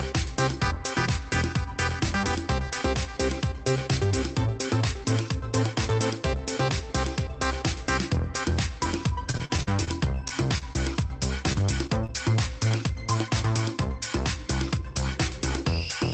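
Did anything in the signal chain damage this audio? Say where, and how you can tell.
Yes. Repeated packet loss (robotic sound) runs from 9.31 to 10.77 s. This is network damage: eleven gaps, the longest 40 ms, each patched by extending the previous sound. About 16% of that stretch is synthetic fill, so it turns choppy, with pieces missing.

Short concealed packet loss follows at 11.53–11.57, 11.87–11.90, 12.06–12.10 and 12.68–12.72 s. These are isolated network drops of about 20 ms each. The receiver bridged every hole by continuing the last pitch or shaped noise, so each one is a brief smear or wobble where short detail can vanish.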